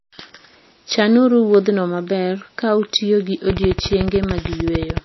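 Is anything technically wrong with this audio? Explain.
Yes. There are two problems.

Across the whole clip the speech is band-limited, with nothing above 5.8 kHz, and has a plainly audible watery, swirling texture. This is likely MP3 compression at a low bitrate, consistent with roughly 24 kbps. Short of bits, the encoder cuts the treble at a fixed point and drops weak spectral lines, which flicker in and out between frames. Sibilants turn metallic and attacks smear.

From 3.50 s to 4.98 s, right after "maber ka utiyo gi", a train of clicks runs over the speech. Evenly spaced pulses arrive at 13.6 per second, about twenty in all, peaking roughly 10 dB above the speech. The clicks are alike in shape and keep their steady pace through pauses. They are heard as a regular ticking. The likely cause is electrical interference or a faulty connection or power supply.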